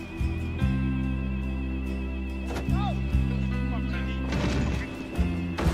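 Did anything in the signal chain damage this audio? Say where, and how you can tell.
No, no signal-chain damage detected.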